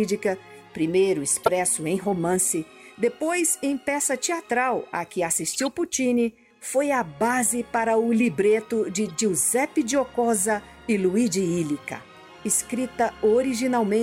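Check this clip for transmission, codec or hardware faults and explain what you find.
Three bursts of corrupt frame decoded appear. They fall at 1.44 to 1.49 s, 5.53 to 5.63 s and 9.07 to 9.11 s, each spanning a few frames. Damaged bits were decoded as if valid, scattering energy to wrong frequencies. The first is loud, the second moderate, the third faint.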